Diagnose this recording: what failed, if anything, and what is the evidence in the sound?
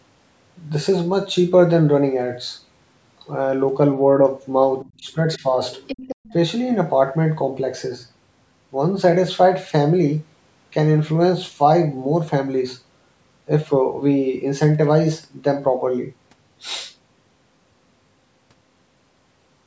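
Other side's voice leaking through, at the call-processing stage: a faint second voice appears from 4.81 to 4.9 s and again from 5.71 to 6.33 s, roughly 15 to 20 dB under the main speech. This is likely residual loudspeaker echo the echo canceller failed to subtract.

Speech suppressed in double talk, also call processing: the main voice dips at 4.97 to 5.18 s, 5.37 to 5.45 s and 6.21 to 6.29 s, the last almost vanishing by around 40 dB. This likely comes from the canceller ducking everything while both sides spoke. It differs from network packet loss because these are level drops rather than clean gaps or glitches, and they cluster around the leaking far-end voice.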